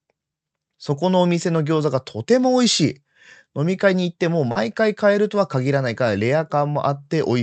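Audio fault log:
4.51 to 4.58 s, short concealed packet loss: about 40 ms of the call failed to reach the decoder in time. The receiver covered the gap by extending the sound just before it, carrying its pitch forward where voiced or filling with shaped noise where not, then blending back into the real speech. The patch is heard as a brief smear or wobble, sitting within the call codec's 8 kHz band limit and its coding noise.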